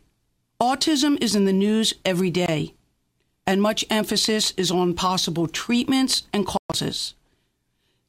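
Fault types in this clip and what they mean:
Bluetooth dropout: at 2.46–2.48 s, right after "in the news every", the speech cuts out for about 20 ms. At 6.57–6.74 s, after "on possible treatments and", roughly 140 ms goes missing in broken gaps spread over about 160 ms, the longest lasting about 120 ms. After each hole the speech picks up further on, as if it had kept running. This is likely wireless audio packets arriving too late and being discarded.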